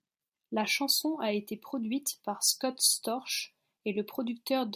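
No technical faults can be heard anywhere in this speech recording.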